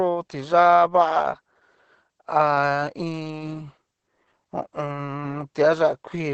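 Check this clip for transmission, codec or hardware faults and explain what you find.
The clip has one codec fault, present throughout. Opus voice compression in SILK mode leaves nothing above 8.6 kHz and heavy damage that fits about 10 kbps. Coarse excitation coding makes the speech hoarse and slightly robotic. A plain low-pass filter would only muffle.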